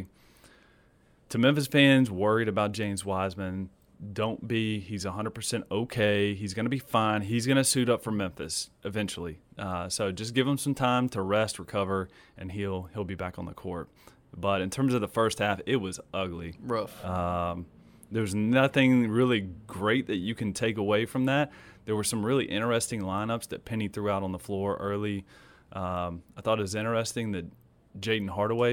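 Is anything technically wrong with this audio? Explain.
No, nothing is technically wrong with this speech recording. No faults can be heard anywhere in it.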